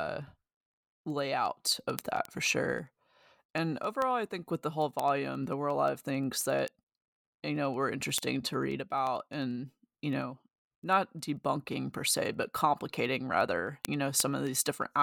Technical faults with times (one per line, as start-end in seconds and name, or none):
0.13-15.00 word clock ticks